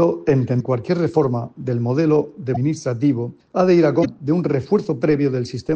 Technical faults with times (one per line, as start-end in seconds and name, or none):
0.00-5.75 MP3 compression
0.56-0.61 damaged data in a compressed stream
2.52-2.57 damaged data in a compressed stream
4.01-4.06 damaged data in a compressed stream